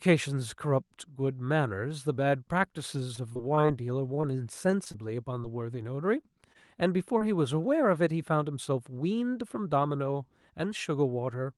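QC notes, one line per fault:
3.15–6.57 s, scattered short gaps: about fifteen brief dropouts, none longer than roughly 20 ms. The receiver patched each by continuing the last sound, leaving small ticks and smears.
7.19–7.23 s, short concealed packet loss: about 20 ms never arrived in time. It was filled by extending the preceding sound, heard as a brief smear or wobble.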